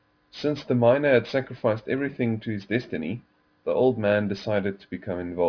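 Speech with aliasing throughout: sibilants sound gritty and metallic because the audio was downsampled, apparently to about 11 kHz, without an anti-alias filter, so content above 5.5 kHz folds back to unrelated pitches roughly 25 dB below the voice. A spectrogram shows mirrored streaks running hard up to the 5.5 kHz band edge.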